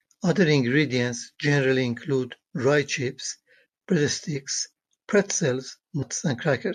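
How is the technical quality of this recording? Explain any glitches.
The speech is marred by four brief glitches: three isolated clicks and a short glitch near the end.

At 2.77 s, 4.33 s and 5.61 s there is a single sharp tick, with no gap or dropout around it. These clicks are likely dropped samples: a fraction of a millisecond of the stream goes missing, so the waveform leaps from one value to a later one. That step is far too short to remove anything audible, but it produces a sudden transient, a thin vertical streak across the spectrum.

At 6.01 s a short blip cuts across the speech. This is damaged data in a compressed stream: a stretch of the encoded data is corrupt, so the decoder misreads the frames there, loses its place, and hunts for the next valid frame header before playback settles again. The misdecoded fragment comes out as that brief, unnatural glitch.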